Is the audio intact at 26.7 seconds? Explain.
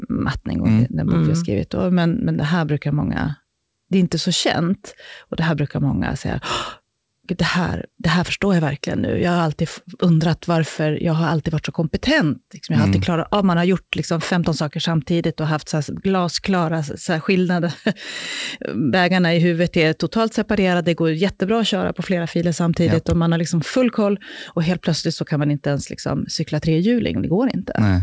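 Yes, the speech at 26.7 seconds is intact, with no dropout, glitch or distortion at that moment, only the steady band limit of the call path, which leaves nothing above 8 kHz.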